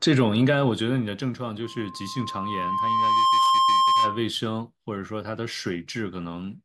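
This is a speech clip with loudspeaker feedback squeal. At 1.63 s a pure tone near 1 kHz appears and swells over about a second and a half. It settles at around 10 dB above the speech and holds until 4.30 s, when it stops. The microphone is hearing the loudspeaker it drives. At 1 kHz the loop gain tops one, so that frequency keeps feeding itself and grows until the loop is broken.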